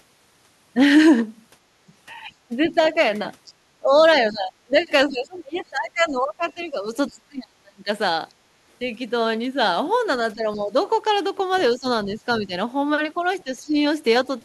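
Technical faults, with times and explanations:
1.70 to 1.83 s and 8.37 to 8.58 s, background gated by the echo canceller: the room sound drops by about 14 dB in the first dip and about 9 dB in the second, each lasting a fraction of a second. The canceller pulls the microphone down hard while the loudspeaker plays, then releases and the ambience returns.
2.49 to 7.89 s and 10.35 to 13.77 s, speech suppressed in double talk: the talker's level dips, deeply in the first span, with drops around 30 dB over roughly three seconds in total, and more lightly in the second, around 10 dB over under a second. Both sides were likely talking at once, so the canceller could not tell the local voice from the echo and attenuated both.
2.84 to 7.12 s and 11.56 s, other side's voice leaking through: a faint second voice sits roughly 30 dB below the talker, as a longer stretch in the first span and a brief scrap at 11.56 s. 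The far end's loudspeaker signal was likely not fully removed from the microphone, so residual echo passes through.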